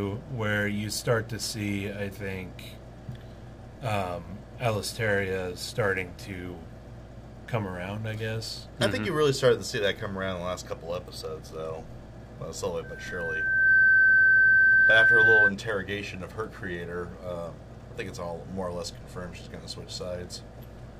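A loudspeaker feedback squeal cuts into the sound from 12.83 s to 15.53 s. It is a single tone at 1.6 kHz. It swells over roughly a second and settles at about 15 dB above the rest of the audio. A microphone is hearing the loudspeaker it drives. At 1.6 kHz the loop gain exceeds one, so that frequency keeps feeding itself and grows. The squeal stops at 15.53 s, when the loop is broken.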